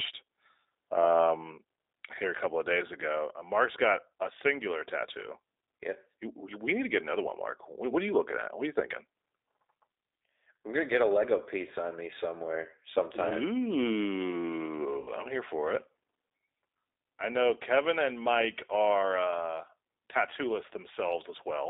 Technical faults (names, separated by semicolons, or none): G.729 codec; VoIP packet loss concealed by the speech codec